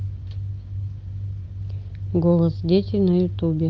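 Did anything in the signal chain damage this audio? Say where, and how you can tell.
No, the chain left this speech undamaged: it passed through a WebRTC call path as expected, and the upper range stops near 8 kHz, which fits an Opus wideband setting around 40 kbps and is normal for that path rather than damage.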